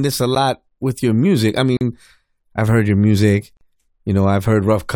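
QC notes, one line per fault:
1.77–1.81 s and 3.57–3.61 s, block of digital silence: after "with your music I" and again after "I've heard your music", the speech drops out for 40 ms and returns abruptly. That hard, fade-free cut into silence sets it apart from a gentle gain dip or a concealed dropout.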